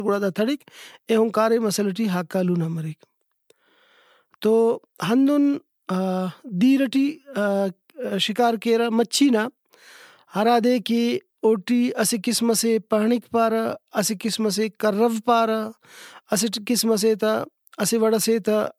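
Throughout the speech, generation loss gives a swirly, hollow smear with blurred consonant attacks and nothing above 19.9 kHz. This most likely comes from roughly seven successive MP3 encodes at what sounds like 128 kbit/s, each requantising on a shifted frame grid.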